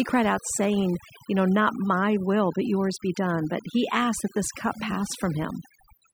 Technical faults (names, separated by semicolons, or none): overdone noise removal